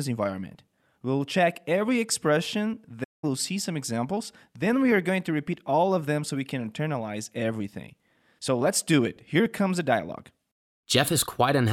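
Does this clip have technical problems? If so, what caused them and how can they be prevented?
Yes. At 3.03 s the speech cuts abruptly to silence in mid-flow and stays silent for 0.19 s, then resumes at 3.24 s. This is a playback stall, likely caused by the player running out of buffered data or its audio thread being blocked until it could catch up. A larger playback buffer, with the audio thread kept at high priority and free of blocking work, would prevent it.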